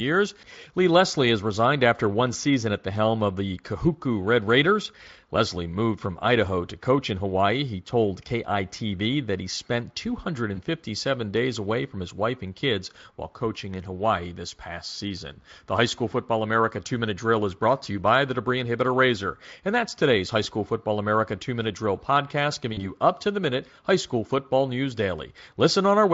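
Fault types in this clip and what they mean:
VoIP packet loss concealed by the speech codec: about 20 ms and 40 ms of lost audio were filled by decoder extrapolation, briefly smearing and fading the speech at 10.55 and 22.73 s.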